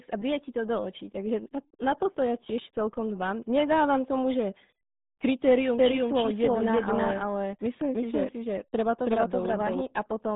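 Speech that sounds muffled and gargly from start to finish, with nothing above about 3.8 kHz and a narrow line band of roughly 150 Hz to 3.7 kHz. This is the RealAudio 14.4 codec, whose heavy damage fits an 8 kbit/s dial-up speech coder. From 5.79 s to 9.81 s, a second full-band copy of the speech trails about 300 ms behind at roughly the same level, with no decay or room colour, and it starts and stops abruptly. This is a doubled audio track, likely from the audio being captured a second time through a slower path.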